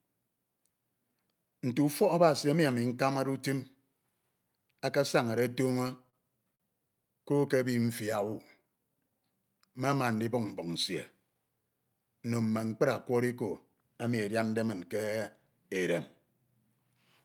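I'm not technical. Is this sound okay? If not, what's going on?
No, there are a few delivery hiccups in this speech recording. From 5.49 to 6.15 s there's a repeated stall (stutter): four tiny pauses, the longest about 33 ms, where late-arriving audio made the player stretch the last sound and the speech drag and catch. At 6.55 s a single short stall from a late packet holds one sound about 45 ms too long, so it briefly hangs or buzzes. From 7.41 to 9.11 s a jitter buffer slow-down plays the speech at about 95% speed, stretching it by roughly 92 ms without changing pitch, so it sounds slightly drawn out. From 11.20 to 12.00 s, just before "nno mme", a jitter buffer speed-up does the opposite, at about 112% speed, trimming roughly a tenth of a second so the speech sounds rushed.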